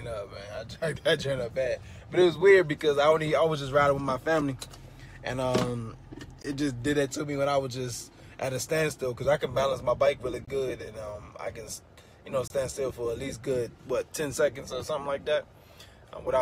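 At 6.42–6.45 s, 10.45–10.48 s and 12.48–12.50 s, the sound drops out abruptly. These are gaps between stream segments, lasting about 21, 24 and 26 ms. Mismatched segment timestamps, which fit 2-second segments, leave holes filled with silence. Nothing is lost.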